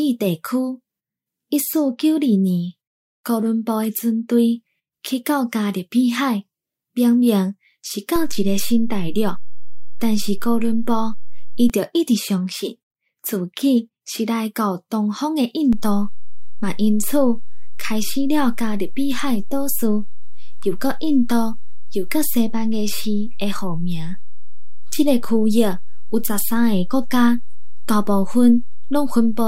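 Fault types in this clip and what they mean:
DC step: low thumps at 8.16 s and 11.70 s, then another at 15.73 s, while the speech carries on unchanged. The waveform's zero line jumps by about -16 dBFS, steps back the first time, and holds to the end the second time.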